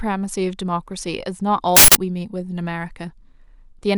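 At 1.77 s a harsh burst of digital noise breaks in and lasts until 1.95 s, about 186 ms. It is the sound of an uninitialised buffer. The playback chain sent a block to the output before any audio had been written into it, so whatever values sat in that memory were played as samples. The length of the burst fits an 8192-sample buffer.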